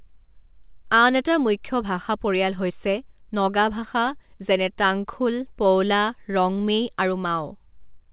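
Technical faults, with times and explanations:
Throughout: clock drift between sender and receiver. The sending side's clock runs roughly 4 percent fast, so the receiver gets more samples than it plays and its jitter buffer keeps filling. The receiver sheds the excess by discarding short slivers of audio, and those small skips recur unevenly across the whole clip. Packet loss or network jitter would leave gaps or concealment at random points. Here the skips all go the same way, from a steady rate mismatch.
0.01 to 8.00 s: repeated timing corrections. To keep pace with a sender running at 104 percent, the receiver repeatedly trims tiny pieces of speech rather than stretching or repeating them, because the surplus always points in one direction. Each cut is brief and unevenly spaced, so if heard at all it comes across as a faint hiccup or an uneven rhythm. Single dropouts or glitches would be isolated, not sustained like this. 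The call audio is narrowband, with nothing above 4 kHz.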